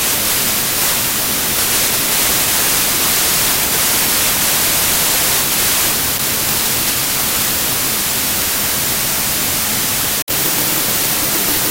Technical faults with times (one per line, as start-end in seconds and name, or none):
0.00-11.70 wrong sample width